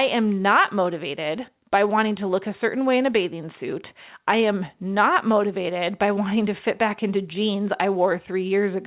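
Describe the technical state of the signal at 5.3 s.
At 5.3 s the speech is intact, with nothing missing, distorted or out of place, and it carries the narrow telephone bandwidth of the call path, with nothing above 4 kHz, as the G.711 mu-law codec at 64 kbps delivers it.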